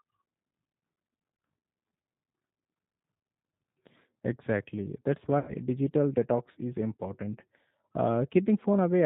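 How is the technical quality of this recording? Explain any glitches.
The quality is limited by a low-bitrate telephone codec throughout, with one short dropout in the middle.

G.729 codec, whole clip: The speech was squeezed through a narrowband codec, which fits 8 kbit/s G.729A. Rather than storing the waveform, it models the vocal tract, the pitch and a handful of pulses every few milliseconds, and keeps nothing above 4 kHz. The damage is plainly audible. The voice sounds muffled, rough and synthetic, as if heard over a cheap phone line.

VoIP packet loss concealed by the speech codec, 5.39 to 5.56 s: About 90 ms of audio never arrived, and the decoder filled the gap by repeating its last pitch and vocal tract settings at falling gain. Just before "digital detox is important", the voice smears into a fading tone or coloured noise. Because the decoder builds each frame on the previous one, the speech stays weak or distorted briefly after the audio returns.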